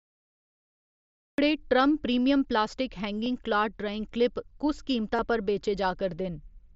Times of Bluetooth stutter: none

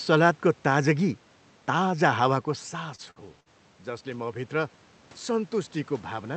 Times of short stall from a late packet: 2.95-3.19

